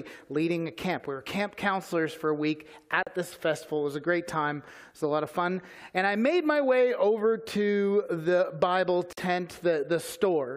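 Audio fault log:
3.03 s and 9.13 s, gap at a join of encoded pieces: the sound drops out for about 39 ms, then about 46 ms, and resumes exactly where it left off. Each section was encoded on its own and butted together untrimmed, so one run's end-of-frame padding and the next run's start-up delay both remain as silence. On a waveform this is a flat dropout with steep but slightly softened edges; a spectrogram shows a clean vertical blank stripe across all frequencies.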